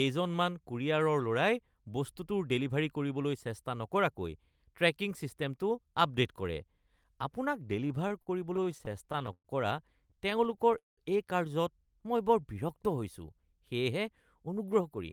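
From 7.87 to 9.48 s and again from 10.11 to 11.00 s, packets reached the receiver late, and its jitter buffer repeatedly ran dry. These are repeated stalls, a stutter. The receiver bridged 15 gaps totalling 313 ms in the first stretch, the longest 113 ms, and 9 gaps totalling 265 ms in the second, the longest 192 ms, by extending the last sound. No speech is lost, but it halts and drags.

From 11.86 to 12.55 s, the buffer needed to rebuild its reserve, so the receiver repeated single pitch periods and added 64 ms. This jitter buffer slow-down plays the speech at 92% speed with unchanged pitch, drawing sounds out.

From 14.47 to 15.02 s, the opposite happened. The buffer held more than its target, so the receiver cut around 70 ms in small pitch-period pieces. This jitter buffer speed-up runs the speech at 111% speed at the same pitch, making it sound hurried.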